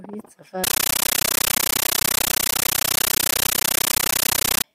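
From 0.64 s to 4.64 s, an AC-3 stream plays as raw samples (compressed stream played as audio): harsh, very loud static chattering at 31.25 Hz, seen as broadband 13.3 ms noise bursts separated by silent gaps.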